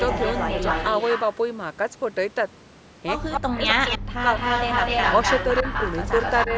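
From 0.0 to 1.35 s a copy of the speech trails the original by 252 ms, a few dB quieter, likely an echo leak from a loudspeaker the far-end echo canceller failed to cancel. The same echo returns briefly at 3.32 to 3.4 s. From 3.4 to 4.31 s the main speech drops in and out, at worst by roughly 40 dB, as speech suppressed in double talk likely turns down the talker while the echo plays. Within that span, echo surfaces again at 3.68 to 3.98 s. From 4.19 to 6.46 s the echo runs at about the same level as the speech, and a last shallow dip at 6.46 to 6.53 s clips the talker slightly.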